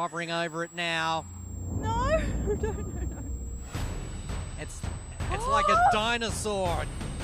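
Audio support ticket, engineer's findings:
Switching supply whistle, present throughout: thin high tone wandering between 7.45 and 8.19 kHz, roughly 25 dB under the audio. Spectrogram shows a drifting horizontal line. PSU in audible burst mode or beating with another supply.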